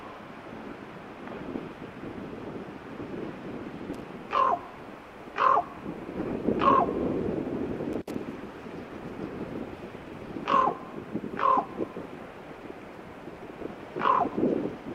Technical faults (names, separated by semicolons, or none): loose connector crackle